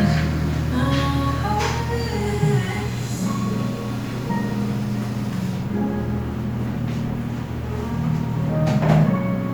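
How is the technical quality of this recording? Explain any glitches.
No glitches or technical faults are audible anywhere here.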